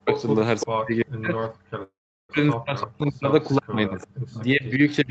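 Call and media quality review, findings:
Speech suppressed in double talk, 0.00 to 5.10 s: level dips and partial dropouts throughout, deepest around 40 dB. Likely the echo canceller attenuating near-end speech during far-end activity. Waveform shows sudden envelope collapses; spectrogram shows harmonics thinning or vanishing, upper bands first.

Echo leak, 0.13 to 0.66 s and 3.42 to 5.10 s: delayed copy of the talker at 338 ms and 344 ms, about 10 dB and about 25 dB below the speech respectively. Likely loudspeaker pickup getting past the canceller. Spectrogram shows duplicated harmonic patterns offset by roughly a third of a second.

Call audio freeze, 1.83 to 2.32 s: sound stalls and a 458 ms gap is inserted, decaying into about 360 ms of silence. Nothing is lost; playback resumes where it stopped. Likely a jitter buffer underrun from delayed packets. Waveform shows a fading tail then flat line; spectrogram shows a smeared, fading frame then blank.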